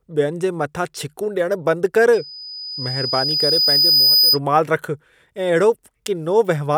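Loudspeaker feedback squeal from 2.13 to 4.39 s in this speech: a 5 kHz tone swells over about two seconds to a few dB above the voice as the mic–speaker loop exceeds unity gain.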